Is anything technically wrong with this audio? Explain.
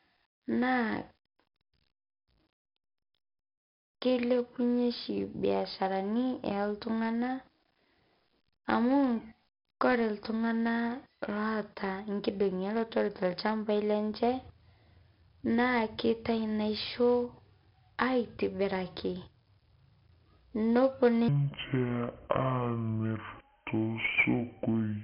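Yes, two faults are audible.

Throughout the clip there is heavy 4-bit ADPCM compression. Each sample is coded as a coarse step from a prediction, so a gritty hiss rides on every loud syllable and sharp onsets distort. Nothing is present above about 5.5 kHz, consistent with a low-rate stream around 44 kbps.

From 21.28 s to the end, a section plays at the wrong speed, at 0.609 times normal. Speech becomes slow and drops roughly ten semitones, sounding deep and dragged. The likely cause is that this part was played against the wrong clock.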